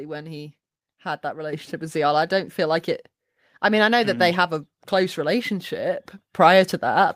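At 1.53 s the microphone volume stepped up by about 7 dB, and at 6.03 s by about 4 dB. The input gain was raised in one jump, so voice and background noise rise together, unlike a compressor or noise gate, which would change them separately.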